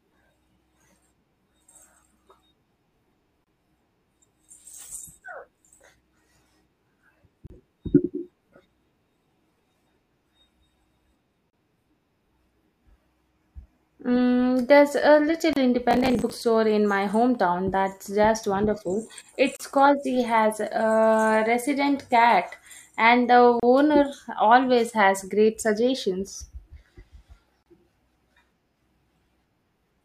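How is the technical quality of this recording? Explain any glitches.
The speech carries two kinds of glitch: a short dropout every four seconds and one burst of crackle.

A gap at a join of encoded pieces occurs at 3.44, 7.47, 11.50, 15.53, 19.56, 23.60 and 27.63 s, each about 28 to 32 ms long. The audio seems to have been encoded in four-second pieces and joined without trimming. The encoder's start-up delay and the padding on the last frame survive at each seam, so a brief silence with smeared edges cuts into the speech before it resumes where it left off.

Processor overload crackle runs from 15.91 to 16.41 s. The processor fell behind on its small buffers, each roughly 10 ms long, and missed around twenty deadlines across that stretch. Each miss replayed a scrap of old audio with hard edges, so the half-second sounds gritty and torn until the load eases.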